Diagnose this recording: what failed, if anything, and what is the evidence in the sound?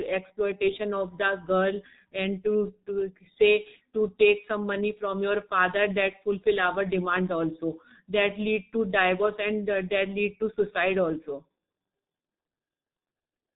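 Codec stage: G.723.1 coding throughout, nothing above 4 kHz, hoarse muffled speech. Unlike plain band-limiting, its slow 30 ms frame updates smear consonants, fitting about 6 kbit/s.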